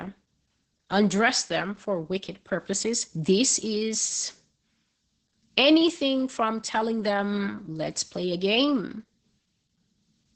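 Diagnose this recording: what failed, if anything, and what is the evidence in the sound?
The codec stage failed, with Opus voice compression across the whole clip. Nothing is heard above 8.8 kHz, so the speech is muffled. It is also hoarse and slightly robotic. That fits SILK's wideband mode at roughly 10 kbps, where the excitation is coded coarsely.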